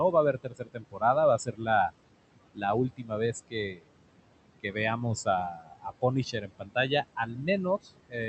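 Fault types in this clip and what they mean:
noise suppressor artifacts: A noise suppressor estimates the steady background and turns down every frequency band it judges to be noise, frame by frame. Here it pulls the room noise, which sits about 17 dB below the speech, down by about 18 dB, so the background sinks in the pauses and comes back under the talking. On a spectrogram the pauses turn dark while a faint noise floor reappears beneath each speech burst, and the waveform's quiet stretches look nearly flat.
speech cut by the noise suppressor: The suppressor mistakes parts of the speech for noise and turns them down along with the background, so soft consonants and word edges sound swallowed or faint. This happens at seven points between 0.44 and 8.15 s, with dips of about 12 to 18 dB, each affecting a short slice of a few hundred milliseconds at most. On a spectrogram, speech energy thins or drops out briefly, and the waveform envelope shows sudden dips within words.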